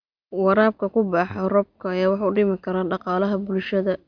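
Listening closely to this short speech recording, nothing stood out as a technical problem at any point.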